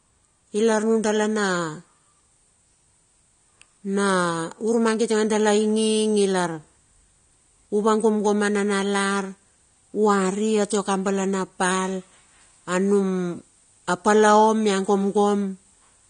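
From start to finish the speech carries AAC compression damage that is plainly audible. Nothing reaches above about 9.7 kHz, so the top octave is gone and sibilants sound dull and blunted. The upper mids have a smeared, warbling texture where the encoder has coarsely quantised or dropped spectral lines under a tight bit budget. The likely cause is an AAC-LC encode at a low rate, with the damage consistent with around 32 kbps.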